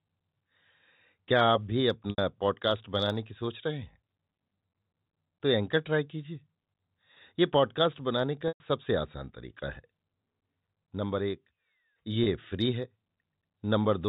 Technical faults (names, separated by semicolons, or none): packet loss with pitch repetition; loudspeaker feedback squeal